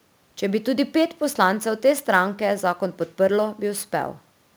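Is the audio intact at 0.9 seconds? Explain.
No. At 0.9 s, as throughout the clip, the speech carries a fine hiss and roughness that swells on louder and brighter sounds and drops away in pauses, sitting around 25 dB below the speech itself. This is sample clock jitter: the converter's clock wavers by a few microseconds, so each sample lands slightly off time, and the error grows wherever the waveform changes fastest. The quiet room noise beneath is separate from this.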